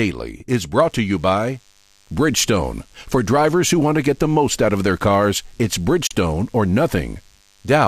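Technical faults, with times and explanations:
0.76–7.87 s, DECT cordless phone buzz: a nearby DECT device's 10 ms radio bursts are rectified by the audio circuit, adding a faint, thin 100 Hz buzz.
6.07–6.11 s, AAC frame loss with muting: the decoder lost 40 ms of data, which fits four 10 ms frames, and zeroed it, so the sound fades into a brief soft-edged hole.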